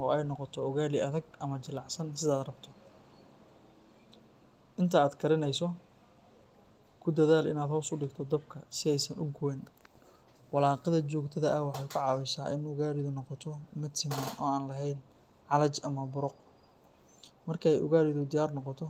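No technical faults can be heard anywhere in this speech recording.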